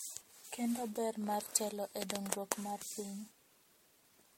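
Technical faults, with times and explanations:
Throughout, generation loss: speech sounds swirlier and more hollow than one encode would explain, with smeared attacks and nothing above 16.5 kHz, likely from repeated MP3 passes at about 64 kbit/s.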